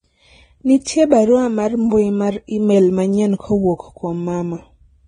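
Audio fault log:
throughout: transcoding between lossy codecs. The speech was likely encoded by one lossy codec and then re-encoded by another, with a sound that points to low-rate Vorbis near 21 kbit/s followed by AAC-LC near 48 kbit/s. The second encoder wastes bits reproducing the first one's artefacts while adding its own, so both kinds of artefact are heard together. The lowest band limit in the chain survives: nothing remains above 9.7 kHz.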